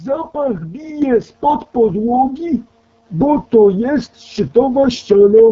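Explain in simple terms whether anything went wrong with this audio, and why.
Two things went wrong. The first runs through the whole recording: the speech was squeezed by the AMR wideband (HD Voice) codec, the kind used for clearer phone calls. Here it ran at one of its lowest quality settings. At that setting the codec rebuilds the voice from a rough model plus filler noise, so the speech sounds raspy and gritty. The highest, airiest sounds are missing too, with nothing above about 7.6 kHz.

The second is a sudden microphone volume step up at 1.02 s. The calling software decided the microphone was too quiet and turned its input level up in a single jump rather than gradually. You hear the speech and the background get louder together, all at once, partway through the sound. After that moment everything stays at the new, higher level.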